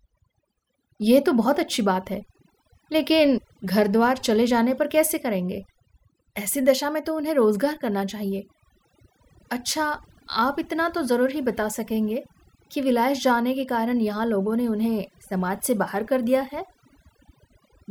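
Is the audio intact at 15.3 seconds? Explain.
No. At 15.3 seconds, as throughout the speech, overdone noise removal is at work. Frequency bands near the estimated noise floor are pulled down or cut, leaving near-silent background with twinkling specks. Unlike a noise gate, which mutes everything at once, this strips individual bands.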